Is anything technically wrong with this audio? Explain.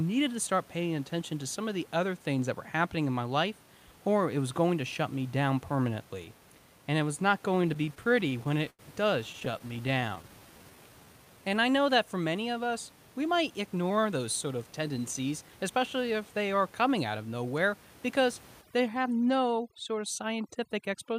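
Yes, there are several playback faults in this speech.

From 7.55 to 8.81 s, right after "and it was not", and again from 9.33 to 10.25 s, the speech drags and stutters. These are repeated stalls: the jitter buffer kept running dry and the receiver stretched the last sound to bridge 18 and then 13 short gaps, the longest 90 ms.

From 10.09 to 11.54 s the speech slows to 86% speed at unchanged pitch. This jitter buffer slow-down repeats pitch periods, adding 214 ms to refill the buffer.

Between "many of us we" and "they are coming out", 13.40 to 16.30 s, the speech sounds hurried at 109% speed. This jitter buffer speed-up trims pitch periods, roughly 0.3 s in total, to shed excess delay.

From 18.62 s to the end, after "out of nowhere because", the background turns near-silent and twinkling, from overdone noise removal suppressing bands near the noise estimate. The room noise underneath sits about 25 dB below the speech.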